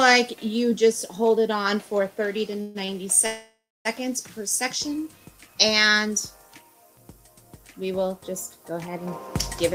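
From 2.61 to 2.77 s the sound hangs as a fading buzz or hiss for about 135 ms, then resumes with nothing lost. This is a call audio freeze, likely packets held up in transit that drained the jitter buffer, so the receiver extended the last sound until they arrived.

At 2.85 to 2.90 s a sound is held about 31 ms too long with a slight buzz or dip. This short stall from a late packet happened because the packet missed its playout time, so the last sound was stretched until it came in.

From 3.26 to 3.87 s a longer call audio freeze fills about 591 ms. The held sound fades and then drops to silence for about 280 ms before the audio picks up where it stopped. The likely cause is again packets delayed on the network path. The gap adds to the delay rather than removing any audio.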